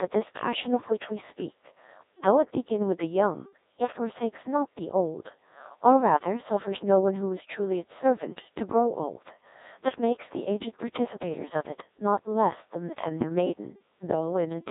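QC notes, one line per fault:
Throughout, Codec 2 vocoder: the speech sounds robotic and buzzy, dull and band-limited with nothing above 3.8 kHz, because the decoder rebuilds it from sine waves using only pitch, voicing, energy and a coarse spectral envelope, which fits a rate near 1.6 kbit/s, discarding the original waveform.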